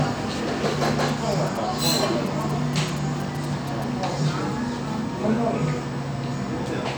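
From 0.85 s to 3.84 s, a galloping dit-dit-dit rhythm of short buzzes cuts across the sound, sitting roughly 20 dB below it. These are GSM signalling bursts: a nearby 2G phone is exchanging brief groups of radio transmissions with the network, and the audio circuitry rectifies that energy into sound. The buzzes pulse at about 217 Hz, the repetition rate of the phone's transmit slots.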